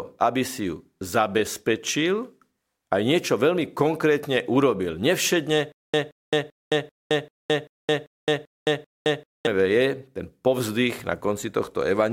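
Stutter with silent gaps, 5.72 to 9.47 s: a 174 ms burst returns nine times between 216 ms silences, likely a stalled stream replaying one fragment.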